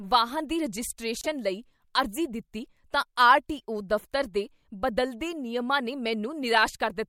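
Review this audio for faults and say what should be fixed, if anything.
Frames out of order at 1.20 to 1.27 s, just before "ਲਈ ਅਰਜ਼ੀ ਦਿੱਤੀ ਤਾਂ": two adjacent single-frame runs, consistent with 24 ms frames, were decoded in swapped order, so the speech there flutters, though no time is lost. Enforce sequence-number reordering in the receive jitter buffer before frames reach the decoder.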